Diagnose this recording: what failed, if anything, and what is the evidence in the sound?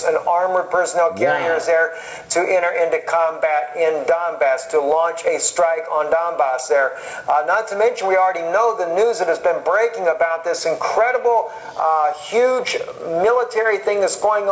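Gain pumping at capture, throughout: gain ducks around 15 dB under loud sounds, likely excess gain driving a fast limiter. Waveform flattened.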